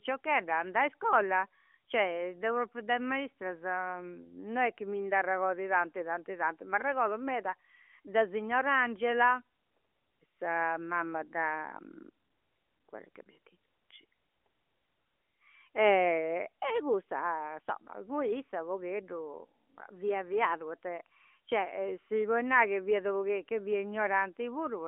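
No faults are audible anywhere in this recording.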